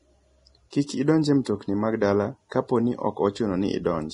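Low-bitrate coding, likely Vorbis compression at a rate consistent with about 29 kbps, discards everything above 10.6 kHz and quantises the remaining treble so coarsely that detail turns to noise. Throughout the speech this gives a dull, hissy, grainy texture with roughened tones.

Pre-echo occurs where the codec spreads the quantisation noise from a sharp onset back across the quiet stretch of its transform block. From 0.70 to 0.73 s, a hiss runs ahead of an attack and softens it. At 1.44 s, between "idonj e" and "mag dala", a shorter smear of noise precedes another onset.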